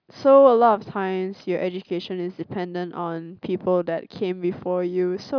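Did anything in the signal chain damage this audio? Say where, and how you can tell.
No, no chain damage heard.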